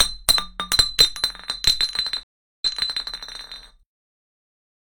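At 2.23 s the audio drops into a stream reconnect: about 0.37 s of silence, then playback resumes roughly 0.46 s earlier, repeating material just heard. Unlike a plain dropout, the fresh decoder restarts at a shifted point, from a resent burst, and the sound comes back by 3.07 s.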